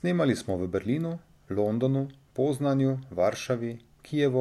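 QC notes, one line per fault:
No faults found in this speech recording; nothing to log.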